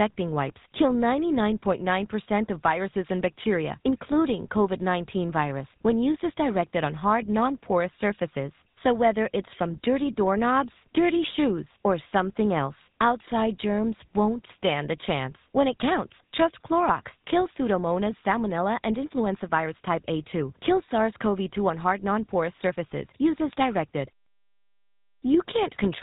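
From start to finish, the speech carries GSM full-rate codec damage, and it is plainly audible. The codec models the vocal tract and drives it with evenly spaced pulses. Only every third sample of that excitation survives. The result is a buzzy, gravelly roughness in the voice. Nothing above 4 kHz gets through, so the sound is dull and narrow. The texture fits the 13 kbps GSM full-rate coder.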